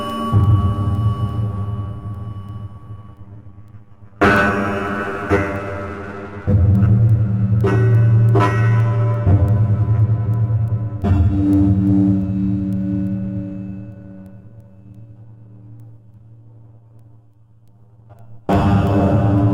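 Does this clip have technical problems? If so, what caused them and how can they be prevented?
No, nothing in these sounds points to a technical problem, so there's no cause to track down and nothing that needs preventing.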